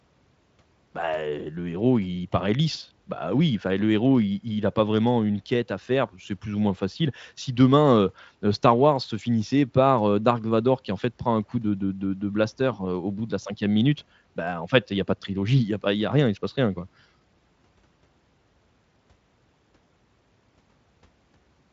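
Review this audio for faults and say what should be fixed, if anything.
Nothing in the recording needs fixing. The speech passes through Speex at 34 kbps with at most faint coding traces, and its content stops at about 7.7 kHz, as expected for that wideband path.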